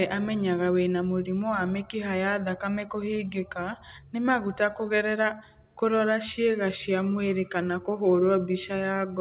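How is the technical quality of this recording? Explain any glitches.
No glitches or faults are audible.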